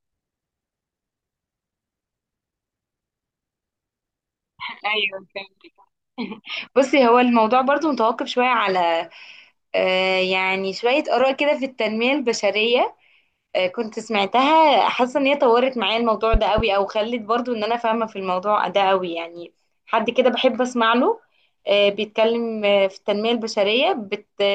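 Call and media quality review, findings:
Two sharp pops, 16.34 to 16.62 s, about 10 dB over the speech, which carries on underneath. Loud pop, likely a voltage pulse entering the capture path.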